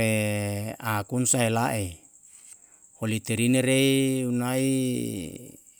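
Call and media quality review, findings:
No findings from the call and media quality review for this speech clip.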